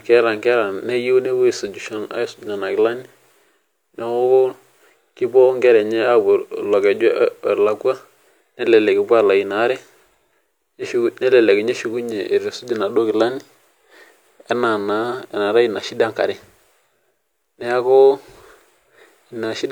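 No technical faults can be heard anywhere in the speech. Nothing in the recording or playback chain draws attention to itself at any point.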